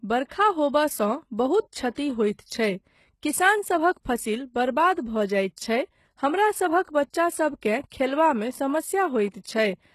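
From start to finish, the s sounds come out gritty and lisping, and the upper treble has a bright but synthetic, metallic sheen, with nothing at all above about 12.3 kHz. The damage is plainly audible. This is likely HE-AAC compression: the lower band is coded directly, and the treble is rebuilt by copying those lower bands upward under a coarse envelope, so the upper harmonics no longer line up with the real ones. The heaviness of it fits a bitrate of around 16 kbps.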